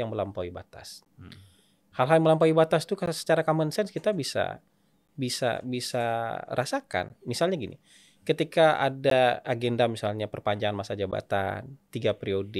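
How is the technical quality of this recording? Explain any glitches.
The speech is interrupted by a repeating glitch: a gap between chunks, heard six times at 1.05, 3.06, 5.07, 7.09, 9.1 and 11.11 s, for example right after "melampaui batas", between "common sense kita bisa" and "bisa bisa", and after "agenda misalnya perpanjangan masa". The audio arrives in 2-second blocks, and about 13 ms of silence sits at each join, giving brief holes. Unlike a dropout, nothing is missing; the speech simply resumes where it paused, on a strict 2-second grid.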